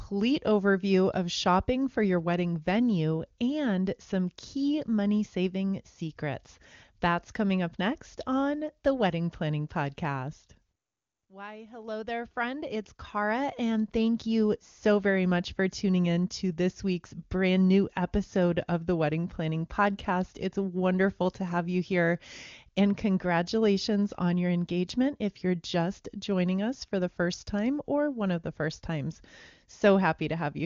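Nothing goes wrong anywhere in this speech recording, which has the clear, wideband quality you'd expect from the AMR wideband (HD Voice) codec running at one of its top rates, most likely around 23.85 kbit/s.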